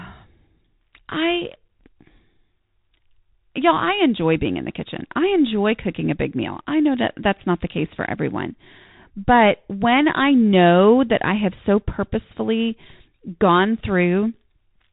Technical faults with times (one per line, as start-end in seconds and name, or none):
0.00-14.92 Bluetooth CVSD headset codec